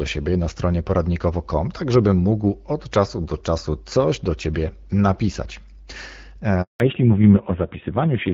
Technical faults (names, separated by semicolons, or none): handover gap; fallback to narrowband